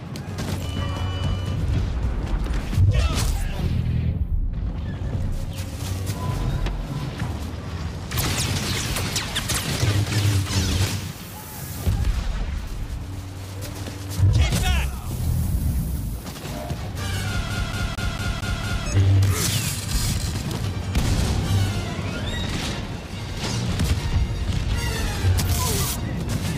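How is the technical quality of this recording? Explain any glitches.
One clear glitch: the CD gets stuck on one turn from 17.50 to 18.86 s. A scratch keeps throwing the laser back a track, so the same 227 ms slice plays six times, giving a fast, even stutter. On a waveform and spectrogram it appears as identical blocks repeating, each separated by a brief silent gap.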